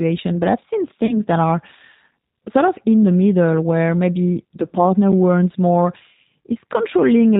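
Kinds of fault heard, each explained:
G.729 codec: Throughout the clip the speech has the rough, slightly synthetic edge of a low-rate CELP coder, and nothing above 4 kHz survives, so sibilants sound dull. The damage is plainly audible and fits the G.729A variant at 8 kbit/s. The decoder rebuilds each 10 ms frame from a vocal tract filter, a pitch predictor and a sparse set of pulses rather than the original waveform, which produces the grainy texture.
VoIP packet loss concealed by the speech codec: At 1.06–1.18 s, between "I've seen" and "that are", and again at 6.22–6.25 s, roughly 30 ms of coded audio went missing each time, which fits three lost 10 ms frames. The decoder filled each gap by extending its last pitch and filter settings at falling gain, and because each frame builds on the previous one, the sound stays weakened or smeared briefly after real packets resume.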